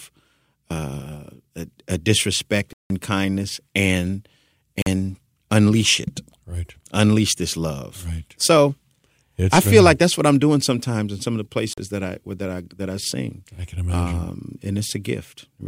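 Right after "a a disrespect", at 2.73 s, the speech drops into a block of digital silence for about 170 ms, until 2.90 s, which fits an 8192-sample block at 48 kHz. Two shorter ones follow, at 4.82 s and 11.73 s, each about 43 ms, consistent with 2048 samples, the second just before "that I that I". Zeros went out in place of the audio, most likely because the buffer wasn't filled in time.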